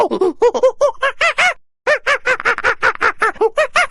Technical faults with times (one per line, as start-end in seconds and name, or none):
none